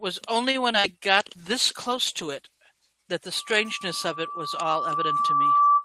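Short concealed packet loss at 0.72 to 0.76 s briefly smears this speech recording. A few hundredths of a second of the stream arrived too late for the decoder, so the receiver patched the gap by extending the preceding sound, following its pitch where it was voiced or substituting shaped noise where it was not, then cross-fading back into the genuine signal. The patch is heard as a momentary wobble rather than a clean dropout. Loudspeaker feedback squeal begins at 3.35 s and runs to the end of the clip. A microphone is picking up the loudspeaker it drives, and at 1.2 kHz the loop gain tops unity, so that single tone reinforces itself on every pass. It swells over roughly two seconds until it sits about 10 dB above the speech, a steady howl that nothing interrupts before the audio stops.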